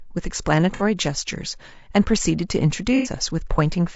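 From the start the speech sounds rough and grainy, with noise filling the gaps between harmonics and a thin, synthetic top end. This is likely low-delay AAC compression (AAC-ELD), whose short frames resolve pitch poorly and fit a bitrate near 32 kbps.

At 0.74 to 0.82 s and again at 2.96 to 3.10 s the sound briefly smears into a noisy, phasey patch. This is AAC frame loss with concealment: the decoder filled 60 ms, then 90 ms, from the last good spectrum, consistent with two and then three lost frames.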